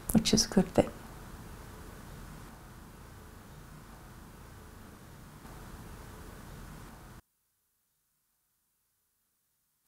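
At 7.20 s the sound drops by about 27 dB and stays down right through to the end of the clip. What's happening is most likely one channel inverted. One side of a stereo pair had its polarity flipped, so when the two were folded down to mono, everything they shared cancelled out, background included. All that's left is the small difference between the two channels, which is why only this much quieter remnant comes through.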